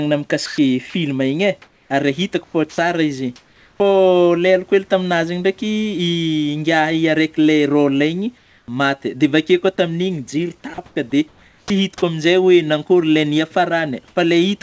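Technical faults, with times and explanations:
0.46 to 3.80 s, sound chopped by the voice detector: the speech breaks up repeatedly, with about 1.06 s in total of quiet syllables and word edges swapped for a flat synthetic hiss. The likely cause is the sender's voice detector toggling transmission on and off.
8.38 to 9.22 s, comfort noise in place of the background: during this pause the textured room background gives way to a steady, featureless noise for about 0.32 s. This likely comes from the sender halting transmission in silence and the receiver generating noise to fill the gap.
9.18 s, short concealed packet loss: a 20 ms hole shows up as a brief smear just where the pause ends. The receiver never got that slice of audio in time, so it stretched the preceding sound to cover the gap before blending back into the real signal.
10.74 to 11.70 s, sound chopped by the voice detector: the speech turns choppy again, with about 0.58 s of softer sound replaced by synthetic noise. 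The likely cause is the voice detector deciding more than once that nothing worth sending was present.
14.08 to 14.16 s, comfort noise in place of the background: for about 80 ms near the end, the background becomes a smooth, uniform hiss about 2 dB away from the real room level, which sits about 38 dB below the loud parts. This is likely discontinuous transmission with locally generated noise filling in.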